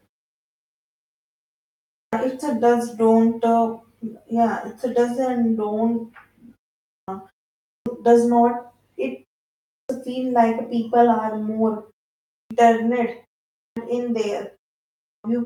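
Clipped start after a pause occurs at 1.88, 6.86, 7.62, 9.66, 12.3, 13.55 and 15.0 s. After each silence, even ones of only 0.37 to 0.51 s, the output device sleeps and needs time to wake again, so the first 0.21 to 0.25 s of speech is lost and words begin abruptly.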